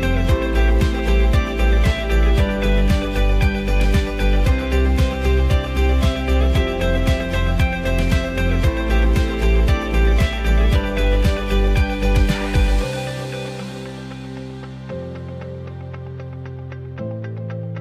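Nothing stood out on listening; no technical faults could be heard anywhere in the recording.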